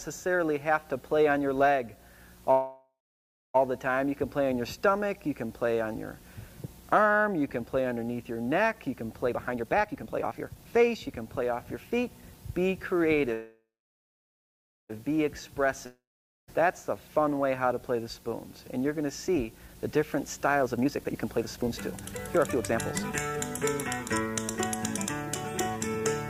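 A call-audio recording with three kinds of network fault. Two call audio freezes, at 2.51–3.56 s and 13.33–14.91 s, most likely come from delayed packets draining the jitter buffer. The last sound is stretched into a fading buzz, then about 0.59 s and 1.21 s of silence, before the audio resumes where it stopped. These show as smeared horizontal bands tapering into a flat waveform. A long network dropout at 15.86–16.50 s is likely caused by packets that never arrived. A similar fading fill and about 0.46 s of silence give way to audio that rejoins further on, with about 0.62 s lost. A jitter buffer speed-up trims pitch periods to shrink excess buffered delay. It runs at 138% from 9.28 to 11.99 s (about a second removed), at 125% from 17.63 to 23.37 s (about 1.5 s removed), and briefly at 111% around 24.19–24.46 s. Pitch is unchanged, so spectrogram harmonics keep their frequencies while events crowd closer together in time.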